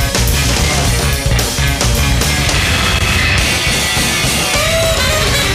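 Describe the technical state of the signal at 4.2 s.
At 4.2 s the signal is intact, with nothing faulty to hear at that point.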